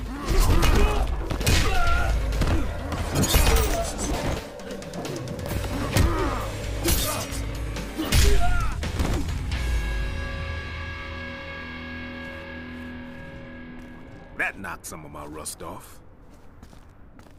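Hard clipping appears near the start, from 0.38 to 0.85 s, where the audio was driven about 5 dB past what a stage in the chain could pass. The peaks in that half-second are sliced flat instead of rounding over, and those squared-off tops generate high-order harmonics that the original sound never had. The result is a crackly, edgy fuzz on the loud moments of that stretch, ending once the level drops back within range.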